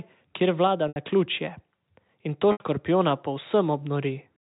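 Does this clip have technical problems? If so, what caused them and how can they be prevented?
Yes. The problem is packet loss with pitch repetition, at 0.88 to 0.96 s and 2.52 to 2.60 s. Each time, about 80 ms of audio went missing, which fits four 20 ms packets. The receiver filled each hole by repeating the last pitch period and fading it out over about 50 ms. You hear a brief buzzy hold, then a short dip toward silence before the sound cross-fades back in. The narrow G.711 telephone band does nothing to mask these gaps. Prevention: a larger adaptive jitter buffer and forward error correction or redundant packets on the network link would cover losses of this length.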